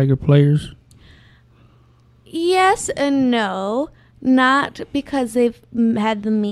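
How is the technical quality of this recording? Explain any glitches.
No glitches turn up anywhere in the recording. The speech runs continuously with no audible interruptions or disturbances to explain.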